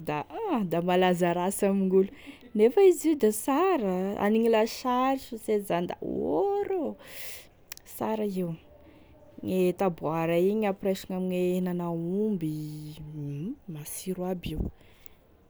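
No technical faults can be heard anywhere in the recording.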